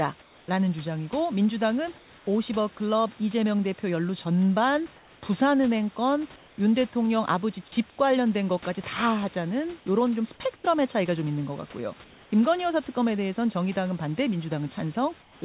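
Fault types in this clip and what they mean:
Comfort noise in place of the background: In seven brief pauses, the room background turns steady and featureless, about 2 to 8 dB quieter. Likely cause: discontinuous transmission filling silence.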